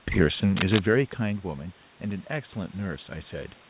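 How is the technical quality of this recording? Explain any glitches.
There's one real glitch here, on speech that's been through a narrowband call path with nothing above 4 kHz, which fits G.711 at 64 kbps. From 0.54 to 0.81 s there's a burst of cable scratch noise, a dense, uneven rustle laid over the audio at roughly the speech level. The likely cause is a worn cable, connector or control being moved. Its contact resistance jumps around rapidly, and that shows up as crackly noise for about a quarter of a second.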